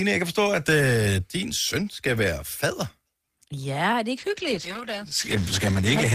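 A speech recording with a call bitrate drop near the end. At 4.19 s the sound quality falls sharply and stays low to the end of the clip, about 2 s later. The audio turns coarse and muffled. The top end is cut away, and the speech sounds rough and watery. The change fits the call's bandwidth estimate collapsing. The encoder was then forced from about 32 kbps down to roughly 10 kbps. With so few bits, it codes coarsely and drops the high frequencies.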